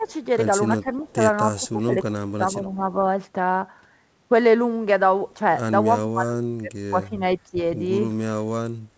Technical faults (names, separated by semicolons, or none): speech suppressed in double talk